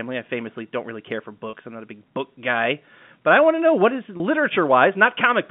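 At 1.50 to 1.53 s and again at 4.17 to 4.20 s, about 30 ms of audio was lost in transit, which fits a single dropped packet each time. The receiver bridged each gap with packet loss with pitch repetition, so the telephone-band sound briefly holds with a slightly buzzy quality before resuming.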